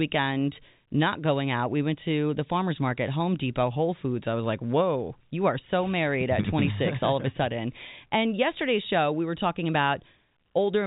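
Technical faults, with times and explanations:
The speech shows G.711 telephone coding working as intended, with the band ending at 3.8 kHz and at most a faint level-following grain from 8-bit logarithmic quantisation, which fits A-law at 64 kbps.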